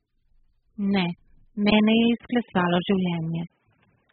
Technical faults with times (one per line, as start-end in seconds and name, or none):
0.00-4.12 AAC compression
1.70-4.12 input switched to a poorer device